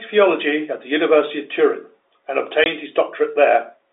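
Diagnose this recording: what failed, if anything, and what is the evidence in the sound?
A network fault: one packet of this telephone-band speech never arrived, and the receiver played silence in its place. It sounds like a 20 ms hole from 2.64 to 2.66 s with hard edges, which fits a single lost packet.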